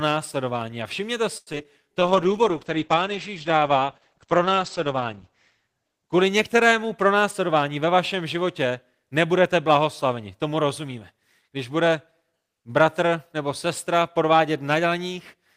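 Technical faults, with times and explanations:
1.37–1.66 s, repeated packet loss (robotic sound): five gaps, the longest 92 ms, patched by stretching prior sound, leaving choppy speech with pieces missing rather than smooth tempo change.
1.83–2.00 s, jitter buffer slow-down: repeated pitch periods add 36 ms, so speech drags to 84% speed at unchanged pitch, drawn out but not choppy.
2.01–7.67 s, call bitrate drop: encoder falls from 32 to 10 kbps, bandwidth from 20 kHz to 8 kHz, giving muffled, watery speech without timing changes.
7.06–7.94 s, jitter buffer speed-up: about 100 ms of pitch periods removed, speech runs hurried at 109% speed, pitch unchanged.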